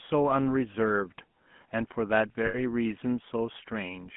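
A buzzy, gravelly roughness runs through the whole of this speech recording, with nothing below about 150 Hz or above 3.4 kHz. That is the sound of the GSM full-rate codec, which rebuilds the voice from a vocal-tract model driven by a coarse pulse excitation at around 13 kbps. From 2.46 to 2.63 s the sound stalls into a brief, rough metallic ring. These are lost GSM frames. The decoder repeated the last good frame's settings for 80 ms, which fits four 20 ms frames.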